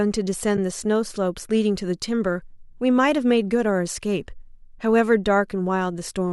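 AAC frame loss with muting occurs at about 0.57 s in this speech. A single frame of about 10 ms, which fits the short frames of the likely low-delay AAC coding, went missing. The decoder zeroed its spectrum, and the overlapping windows fade the sound out and back in, leaving a brief dip.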